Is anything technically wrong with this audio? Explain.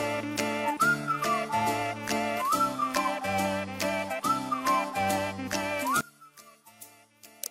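Yes. From 6.01 s to the end at 7.5 s the sound drops by about 20 dB and turns faint. This is likely one channel inverted: with reversed polarity on one side, the shared content cancels in a mono sum, leaving only the inter-channel difference.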